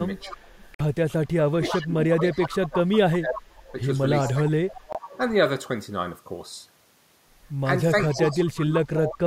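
From 0.2 to 2.69 s there is an echo leak: a far-end echo canceller likely failed to remove its loudspeaker pickup, so a copy of the speech returns about 0.36 s late and about 10 dB below the direct sound. It recurs from 3.36 to 3.72 s at about 15 dB down, from 4.25 to 5.18 s, and from 8.01 to 9.15 s at about 10 dB down, each time as a trailing ghost of the speech.

Speech suppressed in double talk comes next. With both sides active, the canceller likely mistook the talker for echo and attenuated everything. The direct speech dips by about 15 dB from 0.3 to 0.42 s, and by about 30 dB from 1.49 to 3.78 s, where it drops away in pieces for roughly two seconds.

At 0.75 to 0.81 s a Bluetooth dropout likely occurred. Late packets were discarded before reaching the headphones, leaving a 46 ms hole that fits two lost packets. The speech resumes further along, as though it had kept playing.

From 4.35 to 4.69 s the double-talk suppression returns, pulling the speech down by about 30 dB. 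A shorter Bluetooth dropout at 4.93 to 4.96 s cuts a 23 ms gap, consistent with a single lost packet.

From 8.09 s to the end, suppression again overlaps the echo, ducking the speech by about 25 dB for roughly a second.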